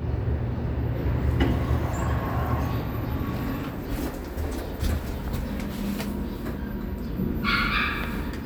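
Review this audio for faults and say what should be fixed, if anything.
No faults turn up in this audio, so nothing needs to be fixed.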